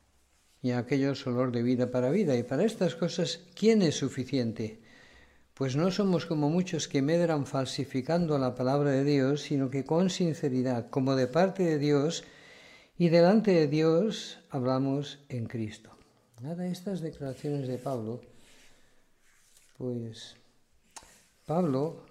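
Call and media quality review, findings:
Block of digital silence at 17.26 s: single sharp tick, about 2 ms of silence. Probable cause is the playback path missing its output buffer deadline. No fade at either edge, unlike packet loss concealment, which smooths or repeats sound instead of dropping to zero.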